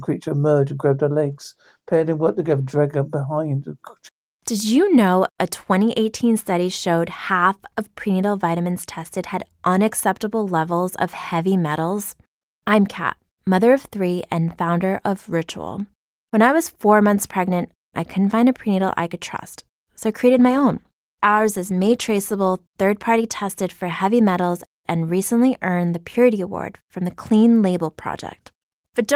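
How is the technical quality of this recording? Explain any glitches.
The recording has two short stretches of degraded quality, both from a call bitrate drop. From 1.25 to 2.85 s, right after "emerged and grabbed her" and before "her behind", and again from 20.37 to 23.75 s, ending just before "heavy metals and recently", the sound turns rough and muffled. Each time the low point lasts about 1.5 s. The connection's bandwidth estimate fell, and the encoder coded more coarsely, which fits a halving from about 32 to 16 kbps. On a spectrogram the upper band thins or cuts off for those spans, and harmonics look smeared.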